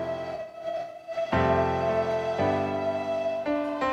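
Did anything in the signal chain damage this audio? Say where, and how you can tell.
Yes. AAC frame loss with concealment in the codec, 0.34 to 1.13 s: runs of up to roughly 70 ms are rebuilt from the last good spectrum as phasey smears, not silent dropout gaps.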